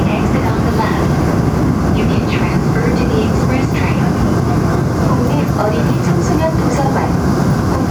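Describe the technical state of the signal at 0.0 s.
At 0.0 s the signal is intact, with no audible fault at that moment.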